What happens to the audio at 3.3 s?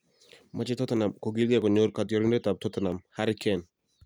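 At 3.3 s the speech sits inside a run of clock drift buffer slips lasting from 0.31 s to 3.57 s, heard as a regular click about every 0.65 s. The likely cause is two devices running on separate clocks that disagree by something near 500 parts per million, so a buffer periodically drops or repeats a small block of around fifteen samples. On a waveform each slip is a tiny step discontinuity; on a spectrogram, a thin broadband vertical line at even spacing.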